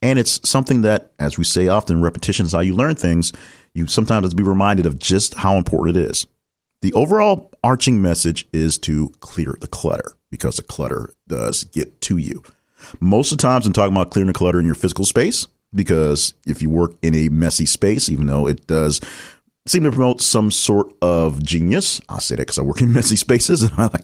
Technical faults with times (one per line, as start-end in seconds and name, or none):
none